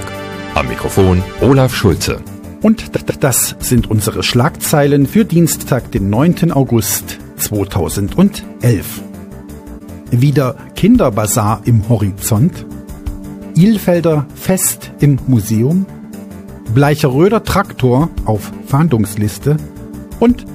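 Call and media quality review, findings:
Repeated frames: stutters at 2.95 s (139 ms block replayed twice), 5.60 s and 16.02 s (70 ms, once). Compressed frames written or sent again; decoder replays them, stretching the clip.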